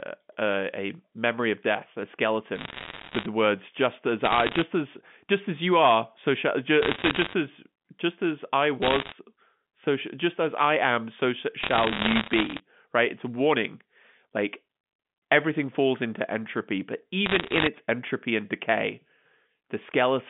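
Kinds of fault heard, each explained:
Bit errors on a digital phone line: flipped bits in the G.711 stream throw single samples far off, so six bursts of sharp ticks and crackle, from 2.56 s to 17.68 s, sit over the speech, appearing as isolated waveform spikes and thin full-height spectrogram lines.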